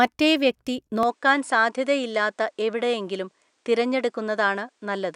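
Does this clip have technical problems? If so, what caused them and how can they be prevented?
Yes. From 1.03 s the speech dulls, cut above 10.2 kHz, with faint new hiss and no gap, likely from the input switching to a poorer device. Fix the recording input in the system settings so it cannot change devices mid-recording.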